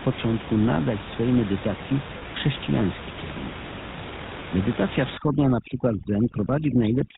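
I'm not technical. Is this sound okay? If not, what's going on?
No. The whole clip went through the GSM full-rate codec, an old phone-network voice squeezer that drops everything above 4 kHz, so the voice sounds buzzy, gravelly and muffled.

At 2.18 s, between "nadać swej medytacji" and "chrześcijański kierunek", there are lost GSM frames. The phone system repeated its last good piece of sound for about 40 ms, leaving a brief rough, metallic ring.

From 5.18 s to the end, overdone noise removal strips away background noise too aggressively. The background drops and breaks up into twinkling specks where the quiet background used to be.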